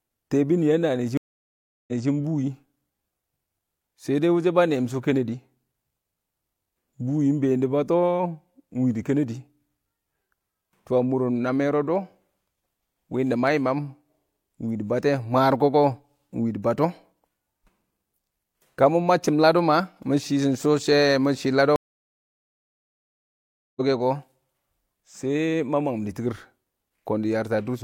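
A stream reconnect hits the speech at 1.17 to 2.09 s: the connection drops, the player falls silent for 703 ms, then restarts a fresh decoder that picks up 213 ms earlier, so a short stretch repeats. A second stream reconnect at 21.76 to 23.81 s brings 2.0 s of silence and resumes roughly a second and a half later, skipping material. Each restart opens fading in over its first frame.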